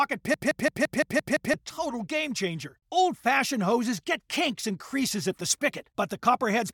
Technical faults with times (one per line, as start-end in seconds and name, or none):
0.34-1.54 system hang loop